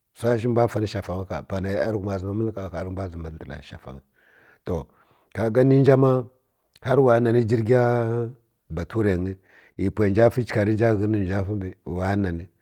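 Clock drift between sender and receiver runs through the whole speech clip. The sending side's clock is running about 3 percent slow relative to the receiver's, so audio arrives a little more slowly than it is played out. The jitter buffer keeps drifting toward empty, and the receiver has to keep patching the shortfall. The result is a faintly uneven pace from start to finish rather than a single clean break.

Repeated timing corrections fill the stretch from 0.04 to 9.06 s. To cover the slow sender, the receiver keeps repeating short slivers of audio, all in the same direction but at irregular spacing. Playback runs at about 97 percent of normal speed, and roughly a third of a second is added overall. Each insertion is tiny, so it comes across as slight hiccups and a slightly dragging, unsteady tempo.

A short stall from a late packet follows from 9.72 to 9.78 s. A packet was not there when it was due, the buffer ran dry, and the receiver held the last sound for 42 ms until the packet arrived. 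Playback then resumed from the same point, so nothing is lost, but the delay grows by 42 ms. That moment sounds briefly frozen, with a faint buzz or dip.

Repeated timing corrections return from 11.07 to 12.18 s. Here the receiver again pads the stream with small repeated pieces, with playback running at about 96 percent of normal speed. About 50 ms is added over this stretch. It is heard as a slight slowing and minor stumbles near the end.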